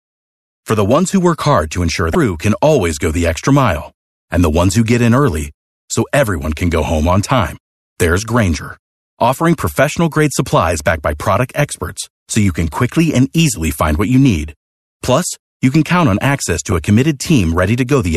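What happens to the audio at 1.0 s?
Nothing goes wrong at 1.0 s; the speech there plays through cleanly with no dropout, click or distortion.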